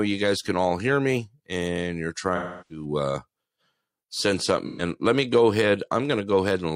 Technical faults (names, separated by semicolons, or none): AAC frame loss with concealment